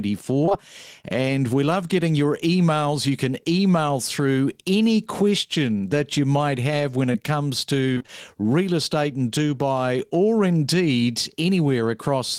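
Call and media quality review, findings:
Short concealed packet loss at 0.45–0.49 s and 0.49–0.53 s (back to back), and 7.13–7.16 s. Brief smear and wobble in the speech. Jitter buffer or network path. Each hole is about 20 ms, which fits one lost 20 ms packet. The decoder extended the preceding sound, then crossfaded back.

Repeated packet loss (robotic sound) at 7.94–8.10 s. Choppy speech with pieces missing. Network path or jitter buffer. Four separate holes, the longest about 23 ms, leaving roughly half the stretch synthesized. Concealment restarts before the real signal recovers.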